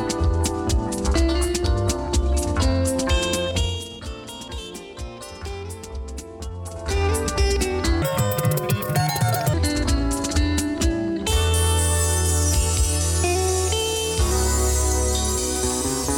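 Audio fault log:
8.02–9.54 s, section at the wrong speed: for about one and a half seconds the audio runs roughly 1.83 times too fast, so it turns rushed and lifts by around ten semitones, then drops back to its normal rate and pitch just as abruptly. Because speed and pitch jump together rather than the pitch shifting alone, the likely cause is that this stretch was played back or rendered against the wrong clock.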